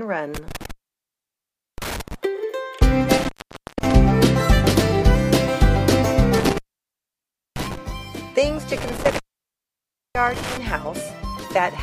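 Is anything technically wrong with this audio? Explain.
Yes. The sound drops out four times, at 0.35–2.15 s, 3.17–3.92 s, 6.37–7.77 s and 8.77–10.57 s, with crackle at each edge and faint hiss during gaps of about 1.07, 0.52, 0.98 and 0.96 s. This is intermittent contact: a loose cable or plug briefly breaking the signal path.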